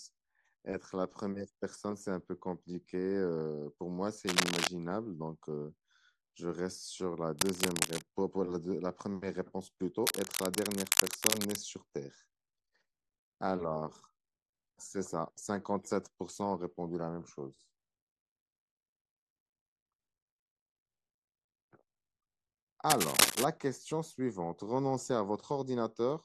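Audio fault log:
4.27–4.68 s, 7.38–8.04 s, 10.04–11.57 s, 22.90–23.45 s: cable scratch noise. Dense, uneven bursts of scratching ride over the speech, around 5 dB above it and level with it at 7.4 s. The likely cause is a worn cable or connector shifting and rapidly changing its contact resistance.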